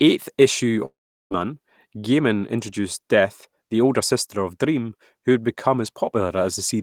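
At 0.85 s the speech cuts out and does not return until 1.33 s. This is a likely long network dropout: for about 0.46 s no audio reached the receiver, and that stretch of speech is simply gone. The decoder first extends the last sound as a fading buzzy hiss, after which roughly 0.38 s of near-silence remains. The speech then resumes mid-flow, with the missing portion skipped rather than delayed.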